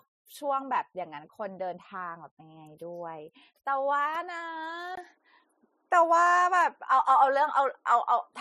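At 4.95 s the sound changes character and stays changed to the end. A gap of about 20 ms marks the switch. After it, nothing remains above 11.4 kHz, so the top end goes dull. The level shifts by roughly 5 dB. A new, faint background noise appears, well below the speech. The likely cause is an input switched to a poorer device in mid-recording. That device brings its own band limit, tone, gain and noise.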